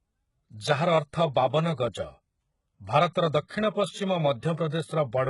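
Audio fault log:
throughout: HE-AAC compression, likely. Nothing survives above about 11.1 kHz, and the treble that's there sounds rebuilt rather than real. The s sounds come out gritty and a bit metallic where copied bands don't line up with the true harmonics. The heavy damage fits a very low bitrate of around 12 kbps.
3.13 s and 3.48–3.50 s: pre-echo. There's a short hiss just ahead of two sharp attacks, smearing them by about 18 ms and 28 ms. The codec spread noise sized for the loud onset back across the quiet moment before it, so the attacks land soft instead of crisp.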